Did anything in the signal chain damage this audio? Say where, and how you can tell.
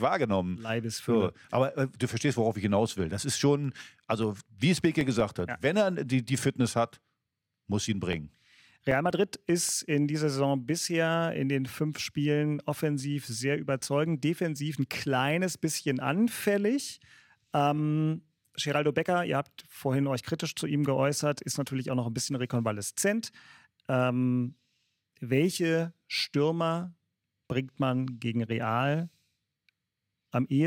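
Yes. CD scratch ticks at 3.64–5.59 s, ending just before "wenn er die die", and again at 7.93–9.89 s. Each burst has about eleven ticks, roughly six a second, the longest about 3 ms in the first and 5 ms in the second. At playback, a disc blemish overwhelmed error correction once per revolution, so the player concealed the missing samples.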